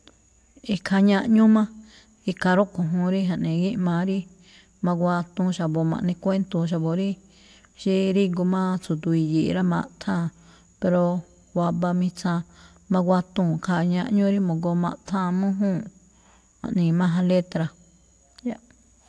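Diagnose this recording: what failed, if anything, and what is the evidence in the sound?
Nothing failed in this recording.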